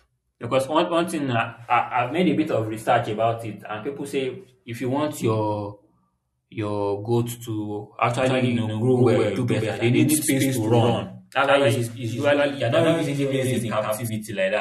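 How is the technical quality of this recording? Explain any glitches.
There's one real problem. From 8.23 s to 14.09 s you get a doubled audio track: the speech is joined by a second copy roughly as loud, trailing by about a tenth of a second. It's most likely a slower second capture path mixed back in, so everything sounds stuttered and slappy, and the copy cuts in and out abruptly.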